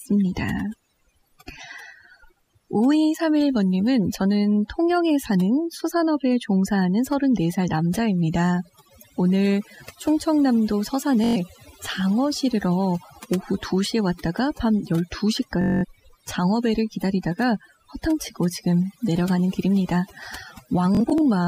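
Overdone noise removal runs through the whole speech clip. The reduction was set too hard. Frequency bands near the noise floor get pulled right down or switched off, and the quiet edges of the speech are cut with them. Pauses fall to near silence, with small twinkling specks left behind.

The first Bluetooth stutter comes at 11.24 to 11.37 s. Packets arrived late or not at all, so the receiver replayed its last short slice until new data came. The gap is about 0.11 s, which fits five lost frames of roughly 21 ms. It sounds like a brief mechanical buzz, then the speech jumps ahead.

A second stutter runs from 15.62 to 15.85 s. About 0.21 s is lost, pointing to ten frames, so the buzz is longer.

The third, at 20.95 to 21.21 s, is broken up. About 0.11 s of dropouts is scattered over a quarter second. The longest run is about 43 ms, heard as a choppy flutter.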